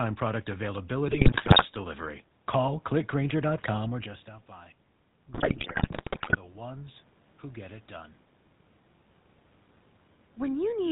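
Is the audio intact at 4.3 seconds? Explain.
No. At 4.3 seconds the whole level, voice and room noise together, is partway through a slow swell that runs from 4.02 to 7.08 s and ends just before "who get it done". This is automatic gain rising. At about 4.0 s the talker pulls back from the microphone and the input drops by about 16 dB. The gain control reads the quieter signal as too weak and raises its gain gradually, by about 4 dB over those three seconds, so the background lifts along with the voice.

The same moment also carries the plainly audible damage of the GSM full-rate codec that runs through the entire clip. The voice has a buzzy, gravelly roughness and no content above 4 kHz, which fits a 13 kbps GSM link. This codec models the vocal tract and drives that model with a regular train of pulses that keeps only one excitation sample in three. That coarse excitation produces the grit, and the narrow band removes the upper frequencies.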